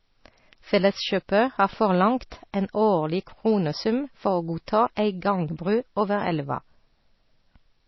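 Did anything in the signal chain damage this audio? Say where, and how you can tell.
Yes. The whole speech clip sounds watery and swirly, with metallic chirps on sibilants and nothing above about 5.8 kHz. That points to the codec stage, likely MP3 compression at a very low bitrate, around 24 kbps, where the encoder cuts the treble and weak frequency lines flicker between frames.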